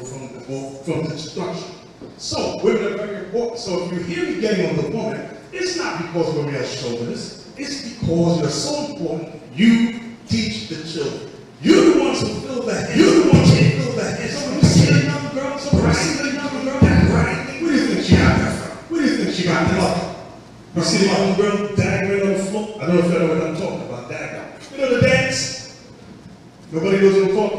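A second capture path, or an edit holding two copies out of step, has likely put the same audio into the mix twice, producing a doubled audio track from 12.91 s to 21.65 s. The extra copy trails the original by about a second and a half and sits at roughly the same level, so everything is heard again as a clean, full-band repeat with no decay or room colour. It cuts in and drops out abruptly at those two points.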